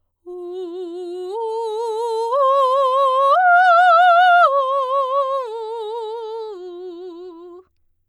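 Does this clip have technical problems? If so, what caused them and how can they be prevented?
No, there's nothing technically wrong to point to in this music clip, so there's no cause to track down and nothing that needs preventing.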